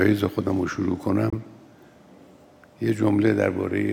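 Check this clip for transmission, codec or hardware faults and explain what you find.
One transmission fault is present. From 1.30 to 1.33 s the audio cuts to a brief silence, then resumes further along, as though playback had continued underneath. This is likely a Bluetooth dropout: about 23 ms of audio, consistent with a single packet, failed to arrive in time and was discarded.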